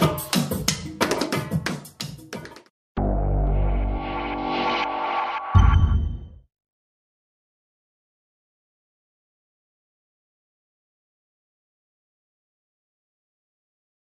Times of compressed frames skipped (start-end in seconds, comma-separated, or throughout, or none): none